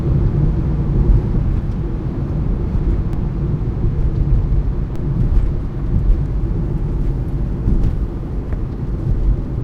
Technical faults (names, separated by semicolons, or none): DC step